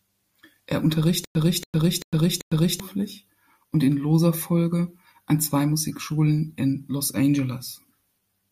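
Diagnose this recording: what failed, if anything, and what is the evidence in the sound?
From 1.25 to 2.80 s the speech stutters with silent gaps: a 282 ms fragment repeats four times every 388 ms, with 106 ms of digital silence between. The likely cause is a playback stall that replays the last buffered fragment at each retry, so the audio meant for that span is lost.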